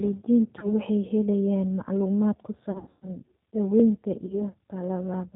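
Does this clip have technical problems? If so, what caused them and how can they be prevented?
Yes. The call passed through the G.729 codec (here the G.729A variant at 8 kbit/s), which models speech with a vocal tract filter, a pitch predictor and a few pulses per frame, and discards everything above 4 kHz. The result is plainly audible throughout: dull, band-limited speech with a rough, synthetic edge. Preventing it means using a wideband codec such as G.722 or Opus wherever both ends support one.

VoIP packet loss concealed by the speech codec also occurs. Packets failed to arrive, so the decoder extended its last pitch and filter state at falling gain. At 0.59 to 0.67 s and 4.26 to 4.42 s, about 30 ms was lost each time, which fits a single packet. From 2.72 to 3.08 s, about 240 ms went missing, scattered over 300 ms, which points to eight packets, with the longest gap 120 ms. Each gap turns into a buzzy tone or coloured noise that fades, and the speech stays weak briefly after audio resumes. 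Reducing this means fixing network congestion or giving voice traffic priority, with a larger jitter buffer or forward error correction as backup.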